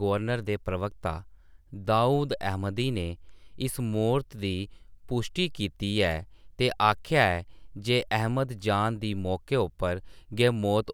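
No technical faults can be heard anywhere in the speech.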